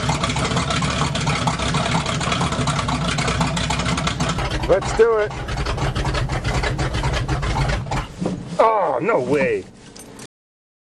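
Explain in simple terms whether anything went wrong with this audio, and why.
Something did go wrong at the very end: the clip has a cut-off end. At 10.26 s the audio stops abruptly in the middle of a sound and drops straight to complete digital silence, which continues for the last two-thirds of a second. Nothing fades out, so the final stretch was never recorded or played back. The recording or export stopped before the last chunks of audio were written.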